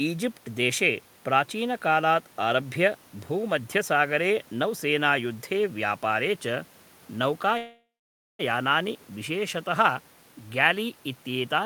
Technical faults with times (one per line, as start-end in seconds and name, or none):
7.57-8.41 call audio freeze